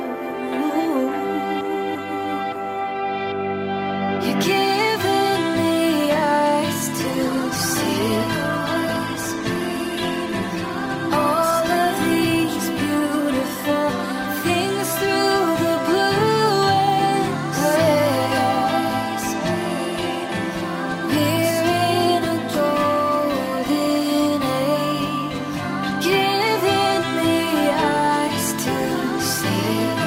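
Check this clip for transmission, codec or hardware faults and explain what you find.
There's one fault, a call bitrate drop from 6.99 to 14.86 s. The encoder's budget collapsed, consistent with roughly 96 down to 19 kbps, bottoming out for 3.3 s, so the audio turns coarse and muffled, losing its highs.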